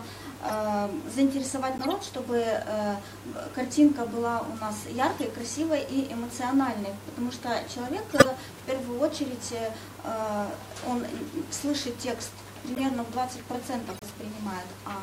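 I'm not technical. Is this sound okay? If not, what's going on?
No. This is a corrupt frame decoded problem: a few small chunks of the compressed audio were damaged, and the player played them anyway instead of skipping them. You hear brief chirps or bursts of noise at 0.48, 1.78, 5.17, 8.10, 12.75 and 13.90 s. The one at 8.10 s is the loudest.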